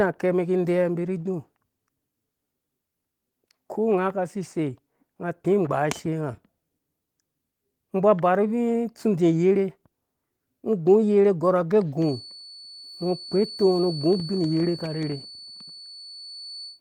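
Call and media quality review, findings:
Feedback whistle, 11.95 s to end of clip. Thin steady tone near 4.5 kHz, roughly 20 dB under the speech, slow swell and fade in level. Likely acoustic loop, loudspeaker into mic, gain sitting at the edge of oscillation without building up.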